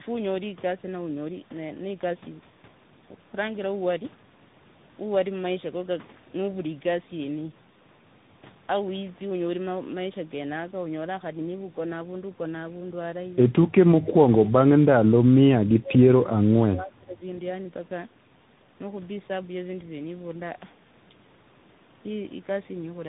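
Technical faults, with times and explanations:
Throughout: tandem speech coding. The speech passed through two speech codecs in a row, an AMR-NB stage at 7.95 kbit/s and then CVSD at 64 kbit/s, with a G.711 mu-law link between them, and it was decoded and re-encoded at each hand-off. The CVSD stage had to code audio already roughened by the low-rate AMR coder, so the errors stack: the speech sounds gritty, warbly and dull, with nothing above 3.8 kHz.
14.02–14.36 s, 15.09–16.00 s, 16.73–17.22 s: speech suppressed in double talk. In each of these three stretches the talker's level drops by up to about 20 dB and parts of syllables fade or cut out, totalling roughly a third, two thirds and half a second. The pattern points to the other party talking at the same moment: the echo canceller likely mistook the near talker for loudspeaker echo and attenuated everything it could not separate.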